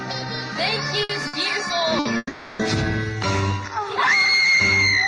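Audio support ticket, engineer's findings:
Burst of packet loss, three hits: 1.03–1.12 s, 1.27–1.36 s, 1.99–2.08 s. Each a brief held buzz or fading hiss of about 60 ms, then a jump ahead, roughly 60 ms of audio skipped. Network/jitter buffer: consecutive packets lost or late, decoder concealment extends the last frame and fades it.

Long network dropout, 2.17–2.62 s. Sound smears into a long decaying buzz or hiss of about 420 ms, a short silence of about 20 ms, then resumes with about 420 ms gone. Likely an extended transport outage, with receiver concealment running until it gives up and mutes.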